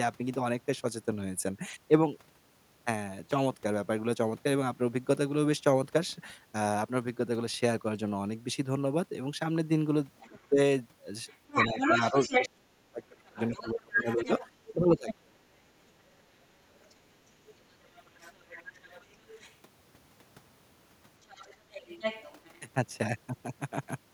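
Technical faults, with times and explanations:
10.2–10.39 s, other side's voice leaking through: a faint second voice, well below the talker at about 25 dB down, slips in briefly. This is likely loudspeaker playback reaching the microphone that the echo canceller did not fully remove.
10.29–10.59 s, speech suppressed in double talk: the talker's voice dips by about 15 dB in short patches, roughly 150 ms in all, while the leaking voice overlaps it. The likely cause is the canceller, unable to separate the two voices, turning both down.
11.28–12.49 s, other side's voice leaking through: the second voice is now as loud as the talker, a full competing voice over more than a second. This is likely uncancelled echo from the talker's own loudspeaker passing straight into the microphone.
11.68–15.36 s, speech suppressed in double talk: the talker fades and cuts out in pieces, dropping by as much as about 30 dB for around three seconds in total. 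The likely cause is the echo canceller treating simultaneous talk as echo and attenuating everything.
13.35–15.14 s, other side's voice leaking through: the second voice returns about 10 dB below the talker and stays audible for nearly two seconds under the suppressed speech. It is likely loudspeaker sound the canceller failed to subtract from the microphone signal.
16.18–19.54 s, other side's voice leaking through: a faint voice, about 25 dB down, lingers in the background for over three seconds. It likely comes from residual loudspeaker echo, which the canceller reduced but did not fully remove.
21.22–22.6 s, other side's voice leaking through: the second voice returns, about 15 dB below the talker, for over a second. This is likely leftover echo from loudspeaker playback that the canceller did not remove from the microphone pickup.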